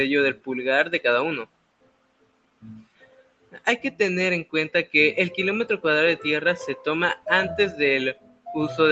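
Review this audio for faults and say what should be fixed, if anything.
A noise suppressor applied to music or sounds is active across the whole clip. A suppressor tuned for speech is treating sustained, steady content as background noise and pulling it down, while transients pass largely intact. Level therefore swings by something like 20 dB as the processor opens and closes, giving a pumping, unstable envelope instead of smooth sustains. Bypass or disable speech noise suppression whenever the source is music or general sound rather than a talker.

Sound cut by the noise suppressor is clearest from 1.45 to 3.67 s and again from 8.14 to 8.49 s. In the first stretch, about two seconds of the span are affected. In the second, a bit under half a second is. In both, the suppressor has classified the material as noise and attenuated it by up to about 20 dB. Held portions sink and decays are truncated, while sharper onsets survive. 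Disabling the suppressor for non-speech sources, as above, prevents these drops as well.

The top end stops at 8 kHz, consistent with the Opus call path running at 20 kbps.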